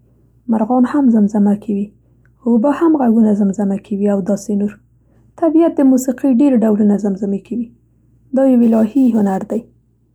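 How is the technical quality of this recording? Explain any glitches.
The recording has one fault, sample clock jitter, from 8.63 s to the end at 10.15 s. The converter's clock wanders by a few microseconds, mistiming samples; steep, loud speech gains a faint hiss about 40 dB down.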